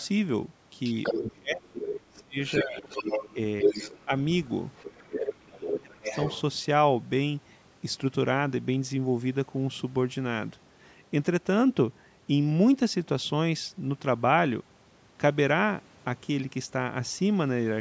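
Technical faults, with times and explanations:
0.00–0.07, 0.84–1.31, 1.82–4.05, 4.76–5.18 and 6.04–6.41 s: other side's voice leaking through. The echo canceller likely left part of the loudspeaker signal in the microphone path, so a second voice runs under the speech. It is barely audible at the start, and close to the talker's level, about 5 to 10 dB down, in the later stretches.
1.17–2.84, 3.34–4.12 and 5.06–6.07 s: speech suppressed in double talk. With both sides talking at once, the canceller likely treated the talker as echo and turned the signal down. The speech dips or drops out in pieces, by about 25 dB for roughly a second in the first and third spans, and more mildly in the second.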